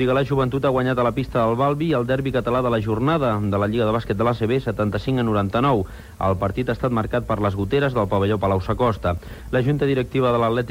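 No technical faults can be heard anywhere in the recording. Nothing breaks up, drops out or distorts at any point along the way.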